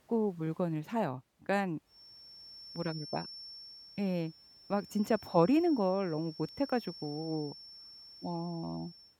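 From about 1.84 s to the end, a feedback whistle sits behind the speech: a thin, steady tone near 5.4 kHz, roughly 20 dB under the voice, swelling and fading slowly in level. It's most likely a loudspeaker-to-microphone loop balanced right at the edge of feedback. The gain around that path is just enough to keep that one frequency ringing, but not enough for it to climb into a full howl.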